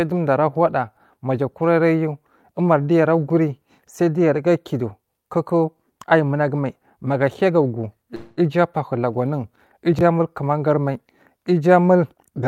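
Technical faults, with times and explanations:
8.15–8.39 s, call audio freeze: just before "abahu lagu anwun", the sound stalls for about 0.22 s. It is held as a fading buzz or hiss rather than dropping to silence, and then resumes where it left off, so nothing is lost and the delay grows by the same amount. The likely cause is packets held up in transit until the jitter buffer ran dry. On a spectrogram the last spectral slice is smeared flat across the gap and dims toward its end. The waveform shows a repetitive, decaying envelope instead of new syllable shapes.
9.93–10.01 s, chunks out of order: after "abahu lagu anwun", a 20 ms chunk of audio turns up three chunks late and plays after material that should have followed it. No audio is lost, but the sequence is scrambled, giving a brief jumbled stutter with three hard joins. On a waveform these show as abrupt discontinuities in level and phase. 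On a spectrogram they appear as thin vertical broadband streaks, with formant tracks breaking and jumping at each join.
12.13–12.47 s, jitter buffer speed-up: the final third of a second runs at about 127% speed at unchanged pitch and sounds hurried. The receiver was draining excess buffered audio by repeatedly cutting out pitch-period-sized slivers, about a tenth of a second in total. On a spectrogram the harmonic spacing stays the same while syllables and transitions are squeezed closer together in time. The waveform shows shortened segments, with tiny seams where cycles were removed.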